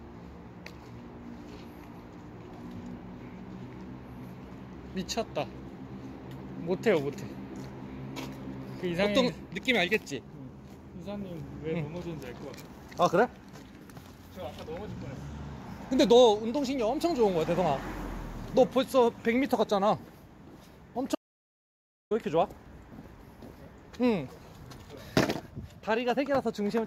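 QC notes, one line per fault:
21.15 to 22.11 s, audio dropout to silence: the sound cuts off abruptly and returns mid-flow after about 0.96 s. The gap is silent with no room tone. The likely cause is lost input while recording continued, writing silence. The missing audio is unrecoverable.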